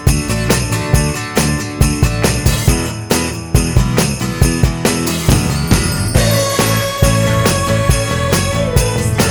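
Nothing here sounds technically wrong; the audio holds together with no fault worth pointing to anywhere along the way.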